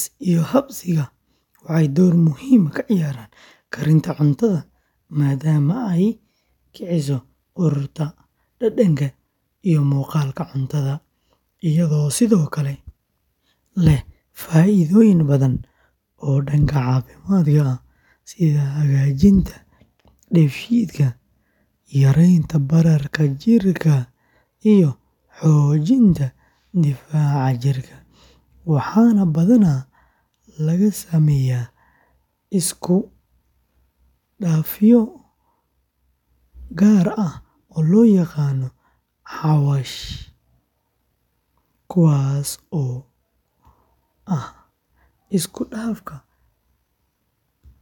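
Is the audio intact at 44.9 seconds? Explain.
Yes, the speech at 44.9 seconds plays through cleanly, with no dropout, click, distortion or other fault at that moment.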